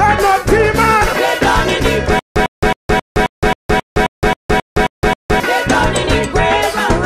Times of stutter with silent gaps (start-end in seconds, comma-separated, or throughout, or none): 2.19-5.40